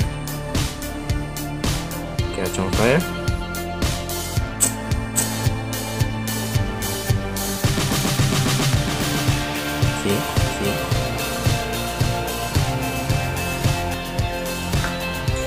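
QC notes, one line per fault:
5.14–13.94 s, doubled audio track: a second full copy trails about half a second behind, some 5 dB quieter, dry, starting and stopping abruptly. Likely a slower second capture path.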